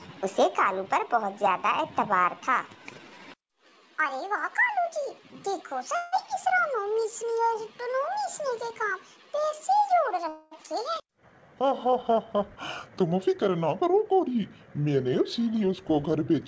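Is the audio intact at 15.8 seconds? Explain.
No. From 14.79 to 16.31 s a jitter buffer speed-up trims repeated pitch-period slices, about a tenth of a second in total, so the sound runs 6% faster and hurried, yet, unlike resampling, its pitch stays unchanged.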